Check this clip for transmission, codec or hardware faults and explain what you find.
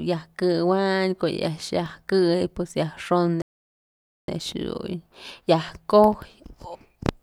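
There is one fault in this speech clip: a playback stall from 3.42 s to 4.28 s. The speech stops mid-flow and the output falls completely silent for about 0.86 s before picking up again. The likely cause is the player running short of buffered data, or its output thread being blocked, so nothing reaches the output until it recovers. The gap sounds like an abrupt dead pause, not a natural break.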